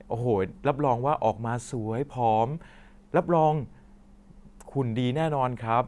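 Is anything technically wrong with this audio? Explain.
No, nothing technically wrong can be heard here.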